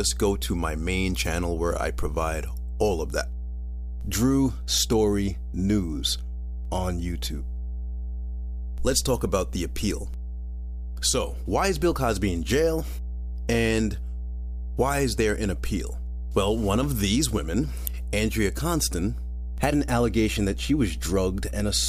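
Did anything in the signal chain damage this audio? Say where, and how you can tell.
Yes, in the analogue wiring. Mains hum at 60 Hz runs throughout the speech, nearly as loud as the voice. A ground loop or nearby transformer is coupling the power line in. A spectrogram shows a constant horizontal line at 60 Hz.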